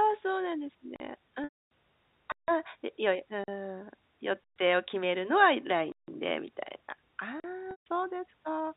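A speech recording over G.711 telephone coding, band-limited below 4 kHz, with two faults. Blocks of digital silence at 0.96, 2.32, 3.44, 4.44, 5.92 and 7.40 s, lasting 40 to 160 ms, show as flat silent gaps with hard edges, likely from an unfilled output buffer. Packet loss with pitch repetition at 1.44–1.70 s (270 ms) and 7.71–7.86 s (150 ms) appears as evenly repeated pitch periods, striped harmonics on the spectrogram, fading into silence before speech cross-fades back.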